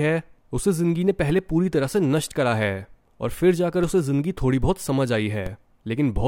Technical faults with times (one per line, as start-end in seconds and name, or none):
1.30 DC step
3.83 DC step
5.46 DC step